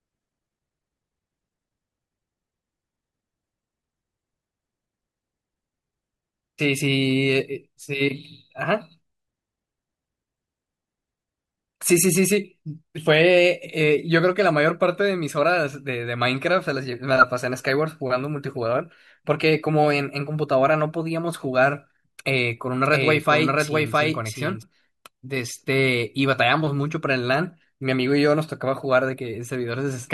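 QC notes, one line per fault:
22.85–24.63 s, doubled audio track: a second full-band copy of the speech runs about 0.7 s behind the original, at roughly the same level. It has no decay or room colour and cuts in and out abruptly. Likely a slower second capture path.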